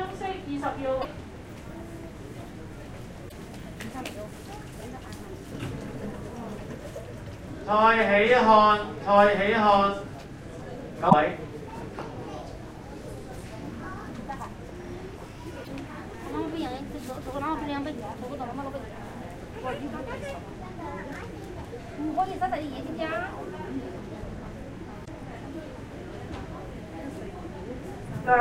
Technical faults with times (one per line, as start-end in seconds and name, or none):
0.98-1.05 damaged data in a compressed stream
3.28-3.32 damaged data in a compressed stream
11.06-11.13 damaged data in a compressed stream
15.61-15.68 damaged data in a compressed stream
25.01-25.08 damaged data in a compressed stream